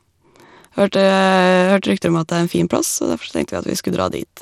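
From start to finish, the speech carries what is likely Bluetooth SBC compression running with a small bit pool, the sort of setting that fits a bitrate around 96 kbps. With too few bits to share out, the codec starves its upper sub-bands and quantises the rest coarsely. Nothing is left above 16.3 kHz, the remaining treble sounds thin and unsteady, and a plainly audible gritty, metallic roughness clings to the sound.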